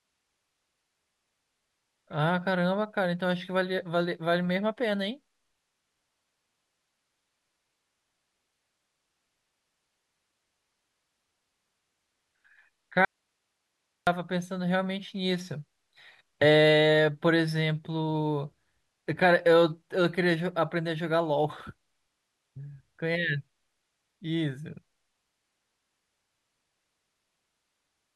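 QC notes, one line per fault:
13.05–14.07 s, audio dropout to a faint residue: likely a brief signal-path break with the line left live, so the speech cuts abruptly to hiss about 55 dB down for 1.02 s.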